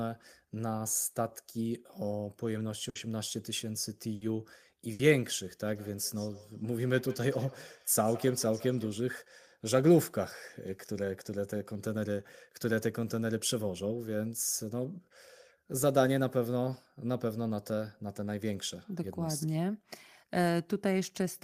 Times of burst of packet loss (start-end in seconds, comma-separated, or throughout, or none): 2.89-2.98, 4.15-4.24, 4.93-5.02